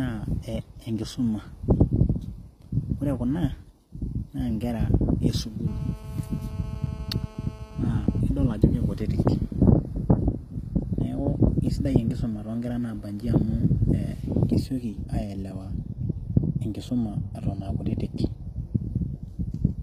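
Throughout the speech, gritty, lispy sibilants and a hard ceiling near 14.9 kHz on the spectrogram suggest likely HE-AAC compression at a low bitrate, about 24 kbps, with replicated treble. From 5.68 to 8.21 s, between "nkera e" and "idol ajo", a steady, raspy GSM phone buzz sits about 22 dB below the speech: a 217 Hz comb of harmonic lines, with regular pulses in the waveform.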